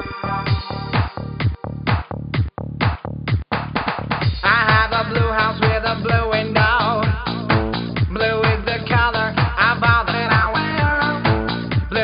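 The audio carries no audible technical fault at any point, with the signal holding steady and intact throughout.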